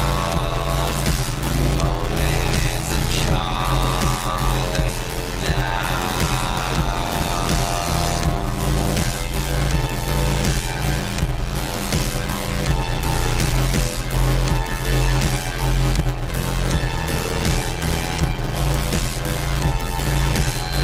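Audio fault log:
Throughout: block size mismatch (padded). There's a steady buzz at 86.1 Hz with everything running at 0.625x speed but near normal pitch. Each 512-sample read gets only about 320 samples of real audio plus zeros, so the gaps repeat at the block rate and stretch the timeline.
4.88 to 4.90 s, 6.57 s, 13.52 s, 16.28 s, 19.18 s: damaged data in a compressed stream. Short glitches. The decoder hits corrupted bytes, can't parse those frames, and jumps ahead once it finds the next valid header.
20.44 s to the end: loudspeaker feedback squeal. A single 4.1 kHz tone swells over roughly half a second and ends up about 5 dB above the rest of the sound. The mic is hearing its own speaker, and at that frequency the loop gain tops one, so the tone keeps feeding itself.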